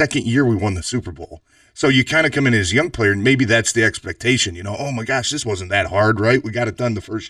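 Throughout the speech runs a channel delay causing comb filtering: one channel lags by about 3 ms, and summing to mono cancels evenly spaced frequencies from around 150 Hz upward. The hollow, phasey tone stays fixed, unlike a flanger's sweeping notches.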